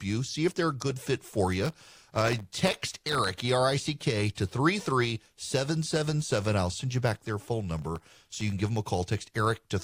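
Speech with two bursts of processor overload crackle, from 1.61 to 3.29 s and from 7.79 to 8.41 s, where the processor repeatedly misses deadlines for very short buffers of under a millisecond. Each miss drops in a tiny silent gap with hard edges, so the sound turns gritty and torn. On a waveform these show as dense notches of near silence; a spectrogram shows scattered broadband vertical streaks across both stretches.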